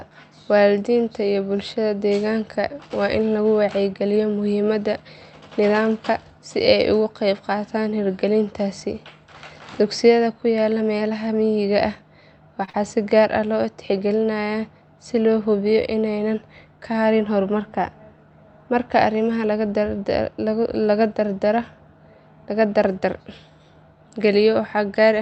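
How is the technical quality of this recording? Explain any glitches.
Two back-to-back glitches occur just after 12.6 s in this speech recording. The Opus call path caps the audio bandwidth at about 8 kHz.

From 12.65 to 12.70 s there is a short stall from a late packet. The jitter buffer ran empty, so the receiver held the last sound for 27 ms, producing an overlong sound with a slight buzz or dip.

From 12.70 to 12.76 s comes short concealed packet loss. About 40 ms of audio never arrived, and the decoder extended the preceding sound to bridge the gap, heard as a brief smear or wobble.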